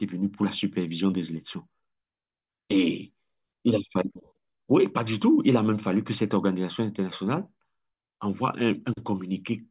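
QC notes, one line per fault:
No faults found in the speech on this pass.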